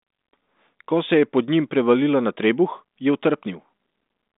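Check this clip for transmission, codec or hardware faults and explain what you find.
Nothing stood out on listening to this speech, which comes through a telephone-band G.726 ADPCM path that cuts everything above about 3.8 kHz.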